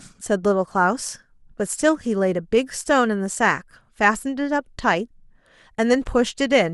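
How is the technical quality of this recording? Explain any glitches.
Nothing in this speech recording calls for explanation; there are no glitches to point to anywhere along it.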